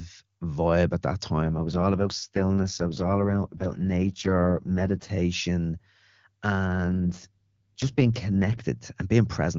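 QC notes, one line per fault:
1.42–5.10 s (after "vibe at that") and 6.67–8.66 s, AMR rate drop: the wideband codec falls to a low rate, which fits a step down from 23.85 to 6.6 kbit/s, so the sound turns rough and synthetic with no gap or narrowing of band.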